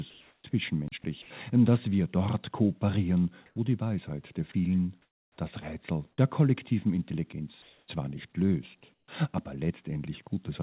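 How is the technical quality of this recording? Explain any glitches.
The recording has several short, distinct glitches, most of them from a call link that stops and starts transmission. The whole clip is band-limited, with nothing above 4 kHz. That fits a G.711 A-law call path at 64 kbps.

Comfort noise in place of the background occurs five times: 0.10 to 0.44 s, 3.46 to 3.56 s, 5.02 to 5.38 s, 7.62 to 7.88 s and 8.94 to 9.08 s. The real background, about 45 dB below the loud parts, is swapped for steady, featureless hiss. This likely happens because the sender paused transmission during quiet stretches and the receiver generated synthetic noise instead. The level shifts at each swap. It rises about 2 to 3 dB in three spots and drops about 8 dB at 5.02 s and about 11 dB at 8.94 s.

An onset clipped by the voice detector comes at 0.42 s, right as the first comfort-noise stretch ends. 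About 20 ms of the sound's beginning is missing. The sender's detector was likely slow to notice the sound restarting, so those first moments were never sent. The sound therefore starts abruptly, without its natural soft attack.

A block of digital silence runs from 0.88 to 0.92 s, about 37 ms long. The audio drops to silence and returns with no fade. This leaves a short hole. Blocks like this most often come from an output buffer that was not filled in time. The gap is long enough to be heard as a short hole rather than just a tick.

Sound chopped by the voice detector affects 1.02 to 1.30 s. Within that stretch, about 100 ms in total is replaced by fill. The detector likely toggled between sending and muting more than once. Quiet parts of the sound vanish in small pieces, which gives a choppy, stuttering texture over that quarter-second.

Sound dropped by the voice detector happens at 4.52 s. 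About 20 ms of quiet sound is lost. The detector likely mistook it for background and stopped sending, and the receiver covered the gap with comfort noise. The result is a brief dip into steady noise before the sound resumes.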